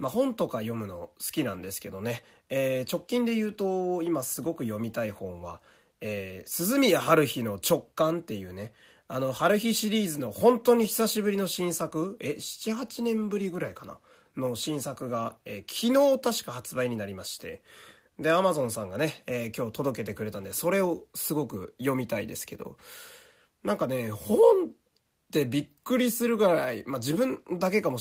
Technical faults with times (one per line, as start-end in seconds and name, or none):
none